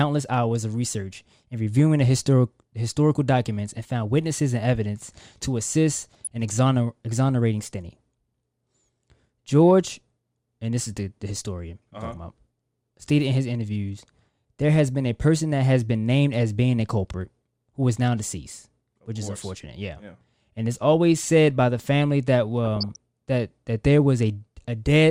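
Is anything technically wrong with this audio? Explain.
Yes, there is DAB burbling in this speech clip, from 5.96 to 6.27 s and again from 22.65 to 22.96 s. Weak reception let bit errors slip past the error correction into the MP2 audio data, which points to an error rate of a fraction of a percent. Corrupted samples put short blips of noise in single sub-bands, and corrupted scale factors make sub-bands jump in level for up to a frame, giving about a third of a second of burbling over the speech each time.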